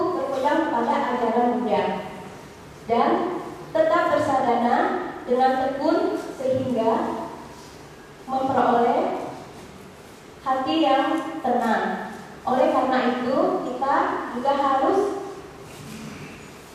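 Nothing stood out on listening to the audio.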